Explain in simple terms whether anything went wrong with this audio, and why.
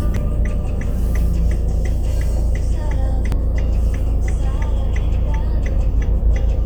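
Two brief glitches, at 0.16 s and 3.32 s, come from damaged data in a compressed stream. The decoder briefly misreads broken frames and has to find its place again. That gives a short glitch in the sound.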